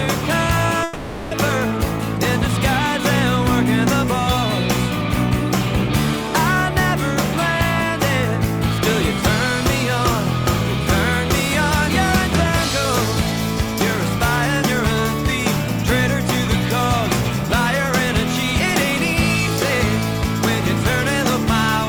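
At 0.83 s the sound stops moving forward and a buzzy, fading continuation of the last moment fills in until 1.33 s, with no drop to full silence. This is a call audio freeze, likely caused by packets stalling in transit so the jitter buffer ran dry and the receiver stretched what it last had. When delivery resumes the audio continues exactly where it left off, so about 480 ms of filler is inserted, nothing is lost, and everything afterwards runs 480 ms later.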